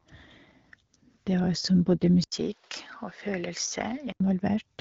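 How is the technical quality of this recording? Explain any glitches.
There's one real glitch in this speech recording, a stretch in the middle where the pickup changes character. From about 2.24 s to 4.2 s the sound goes duller and a bit quieter, roughly 5 dB down, with an 80 ms gap of silence right at the switch. That's most likely the input switched to a poorer device: nothing comes through above 6.4 kHz, and a new noise floor appears around 30 dB below the speech. So you get that boxy tone until it flips back.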